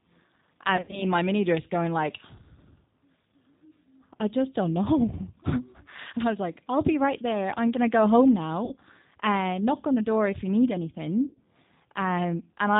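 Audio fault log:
Throughout: G.729 codec. The speech is squeezed into what fits an 8 kbit/s G.729A stream, rebuilt from a vocal tract filter, a pitch predictor and a few pulses per frame. Nothing above 4 kHz survives. The voice sounds plainly rough, narrow and slightly synthetic.
0.77 to 1.03 s, 8.65 to 8.76 s, 11.27 to 11.40 s: VoIP packet loss concealed by the speech codec. Packets went missing, about 120 ms lost before "in my mini dress" with a longest run of 80 ms, 60 ms between "I'm gonna go home" and "and uh knock on", and 100 ms after "door if you need". The decoder stretches its last pitch and filter into a fading buzzy tone or coloured noise. The voice stays weak briefly afterwards.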